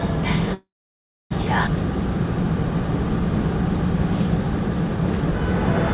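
From 0.54 to 1.32 s there is a call audio freeze, likely caused by packets stalling in transit until the jitter buffer ran dry. The last sound is briefly stretched into a fading buzz or hiss, then about 0.63 s of silence, and the audio resumes where it left off.

At about 1.66 s comes a skip ahead. Roughly 0.4 s of audio was discarded while later audio was already queued, so playback jumps forward with almost no gap, the two sides joined nearly directly. Throughout, the call path limits the sound to below 4 kHz.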